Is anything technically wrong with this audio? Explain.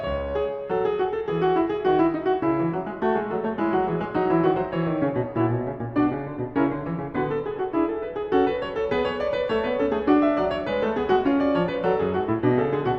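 No, nothing technically wrong stands out here; this bit of music comes across just as it should, with no faults to point to.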